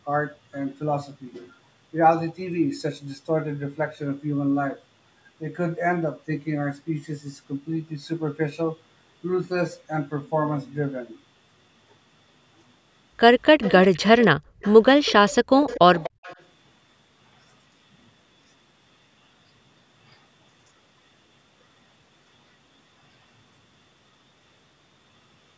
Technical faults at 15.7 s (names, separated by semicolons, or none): echo leak